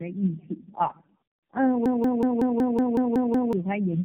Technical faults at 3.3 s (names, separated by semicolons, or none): tandem speech coding; system hang loop